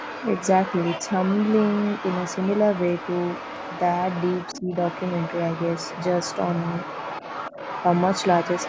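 Throughout the recording, from 0.0 to 8.68 s, a second voice runs underneath the main talker, sitting roughly 10 dB below it. This is the other side's voice leaking through, the likely result of the far end playing from the talker's loudspeaker and reaching the microphone without being fully removed by the echo canceller. Because it is present the whole way rather than in scraps, it reads as a constant faint second speaker layered under the speech, not as occasional bursts.

Between 4.54 and 4.71 s the main talker's level drops by about 15 dB for roughly 150 ms, then recovers. This is speech suppressed in double talk. Both sides were active at once at that moment, and the canceller likely could not tell the local talker from the loudspeaker echo, so it attenuated the whole signal. The audible effect is a brief hole or sag in the voice. The call's microphone processing shapes the band, with nothing above 8 kHz.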